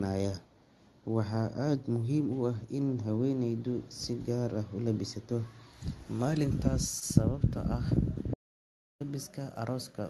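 At 6.99 s the speech stalls briefly, until 7.03 s. This is a short stall from a late packet. A packet arrived late and the jitter buffer ran dry. The receiver held the last sound for about 20 ms while it waited. Then it picked up exactly where it left off, so nothing is lost. You hear a sound drawn out slightly too long, with a faint buzz or dip. The timing shifts later by about 20 ms from there on.

At 8.34 s the speech cuts out completely. It returns at 9.00 s. This is an audio dropout to silence, lasting 0.66 s. The gap is silent. No room tone or background noise remains. Whatever was said in that stretch is gone. The sound stops and restarts mid-flow. The likely cause is the input being lost, through a disconnect, a failed link or a stray mute, while recording carried on. The call codec's top end stops near 12 kHz, which fits Opus at around 32 kbps.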